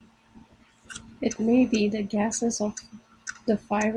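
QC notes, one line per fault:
No fault found in the speech.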